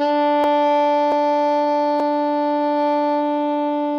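At 0.44 s the music jumps forward, losing roughly a tenth of a second, and shorter skips of a few hundredths of a second follow at 1.12 s and 2.0 s. This is likely a dropped buffer (overrun): samples were overwritten before being read, so the material on either side is spliced with no gap. The waveform shows an abrupt discontinuity, and the spectrogram shows a thin vertical broadband line where the sound changes suddenly.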